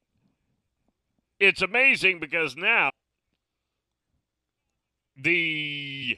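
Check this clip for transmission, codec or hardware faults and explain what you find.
One fault is present: a short burst of damaged data in a compressed stream, from 2.88 to 2.91 s, just after "it's amazing because". For about 24 ms the decoder met corrupted bytes, could not read the frames there, and had to resynchronise on the next valid frame header. That produces a brief disruption. A network packet dropout often gets smoothed over by concealment. Here the glitch comes from the decoder failing on malformed data and losing sync.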